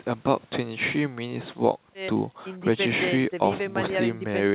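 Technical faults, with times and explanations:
There are no technical faults in this speech, so there are no times or explanations to give.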